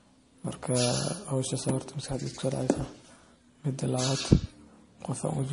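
From start to end, the speech has a watery, swirling texture, and s sounds chirp metallically. This is likely MP3 compression at a low bitrate, which fits about 40 kbps. Short of bits, the encoder switches weak frequency lines on and off between frames.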